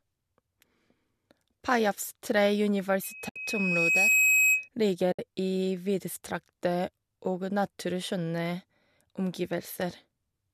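Loudspeaker feedback squeal runs through this speech recording from 3.03 to 4.69 s. A microphone is catching the loudspeaker it drives, and at 2.5 kHz the loop gain tops unity, so a pure tone swells over roughly a second until it sits around 5 dB above the talker. AAC frame loss with muting cuts two soft-edged holes of 70 ms, at 3.29 to 3.36 s (inside the squeal) and at 5.12 to 5.19 s. The decoder zeroes the missing frames' spectrum, and the overlapping windows fade the sound out and back in.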